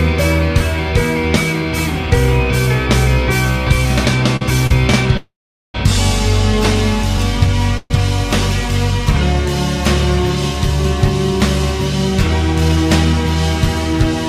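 At 4.36 to 4.42 s and again at 4.67 to 4.71 s there are two short stalls from a late packet. The jitter buffer ran dry, so the receiver held the last sound for about 45 ms and then 32 ms before resuming at the same point. Nothing is lost, but the sound briefly hangs with a faint buzz or dip.

From 5.17 to 5.75 s a call audio freeze stretches the last sound into a fading buzz or hiss and then roughly 420 ms of silence. A second, shorter freeze at 7.77 to 7.91 s extends the sound by about 125 ms. Both were likely caused by packets held up in transit, and playback resumes where it stopped.

From 12.61 to 13.36 s a jitter buffer speed-up removes short pitch-period slices repeatedly. This trims about a tenth of a second of excess buffered audio, so the sound plays at about 112% speed with unchanged pitch and comes across as hurried.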